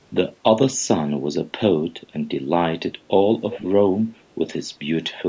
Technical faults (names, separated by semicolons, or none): echo leak